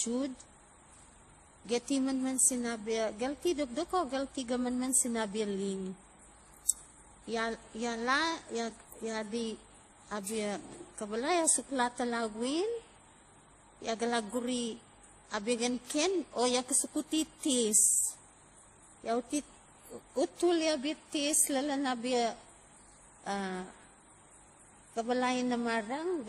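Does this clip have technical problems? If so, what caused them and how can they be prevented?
Yes. Transcoding between lossy codecs runs throughout the speech: nothing is present above 15.1 kHz, and artefacts from different codecs overlap. The likely cause is a chain fitting low-rate WMA, then MP3, then higher-rate WMA, each re-encoding the previous damage. To prevent it, encode once from the original uncompressed source.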